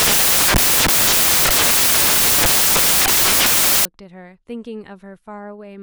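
From 0.0 to 3.85 s the speech is buried under samples built from the wrong bytes. The reader has assembled each sample with its bytes misordered or offset by one, so the rapidly varying low-order bits land in the most significant position. The result is harsh, loud broadband noise. A spectrogram shows dense energy smeared across a wide range of frequencies, and the waveform looks like a solid block.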